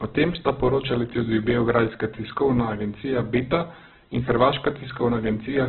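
From start to finish, the speech sounds heavily degraded. Nothing is heard above 4.4 kHz, so it is narrowband and dull. Voiced sounds turn rough and grainy, with a noisy texture filling the bands that remain. The likely cause is Opus compression at a very low rate. The narrow bandwidth and grain fit a stream near 8 kbps, and the noise-filled rather than hollow texture points to its music mode.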